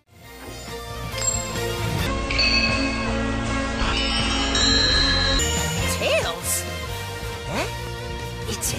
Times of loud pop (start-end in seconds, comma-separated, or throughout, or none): 7.87-7.89